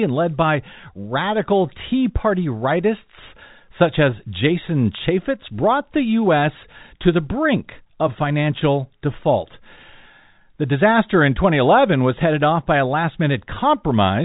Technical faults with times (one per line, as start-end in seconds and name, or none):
none